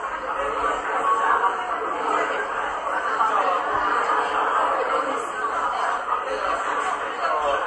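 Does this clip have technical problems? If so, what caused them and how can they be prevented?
Yes. Throughout the audio, nothing remains above 11.4 kHz, and a plainly audible watery swirl runs through it. This is likely MP3 compression at a bitrate around 48 kbps: the encoder cuts the treble and drops weak frequency lines frame to frame. Encode at a higher bitrate, or keep a lossless master.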